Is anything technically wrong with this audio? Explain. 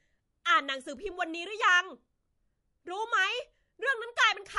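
Yes. Throughout the speech, the sound is watery and swirly, with s sounds turning metallic and chirpy, consonant attacks smeared, and nothing above about 11.3 kHz. This is likely MP3 compression at a low bitrate, about 48 kbps. Short of bits, the encoder cuts the treble at a fixed point and zeroes weak frequency lines. Those lines switch on and off from frame to frame, which produces the swirl and the chirps.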